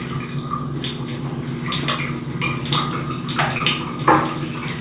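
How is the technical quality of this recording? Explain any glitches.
The recording has one glitch, a short concealed packet loss, heard through a G.711 mu-law call path at 64 kbps that leaves nothing above 4 kHz.

From 3.58 to 3.62 s, about 20 ms of audio never arrived in time, and the receiver covered 17 ms of the gap by extending the preceding sound before blending back into the real signal. It comes across as a brief smear or wobble. On a spectrogram it shows as a short, smoothed patch, and on the waveform as a repeated-looking stretch with a slight join.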